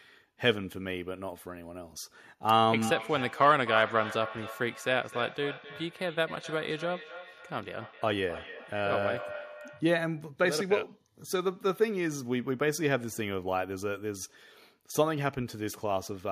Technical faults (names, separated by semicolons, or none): feedback echo between two devices